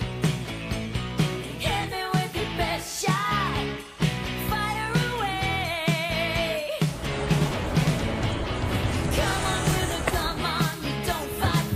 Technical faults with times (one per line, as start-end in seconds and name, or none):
none